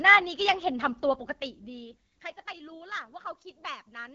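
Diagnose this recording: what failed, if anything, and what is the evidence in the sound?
The failure is at the codec stage: the speech has passed through the AMR wideband (HD Voice) codec, audibly damaged across the whole clip. Nothing sits above about 7.5 kHz, and the top band sounds like hiss rather than real detail because the codec models speech only up to 6.4 kHz and fills the band above with shaped noise. The rough, raspy texture throughout points to one of the lowest AMR-WB rates, around 8.85 kbit/s. Narrowband AMR would cut near 3.4 kHz instead.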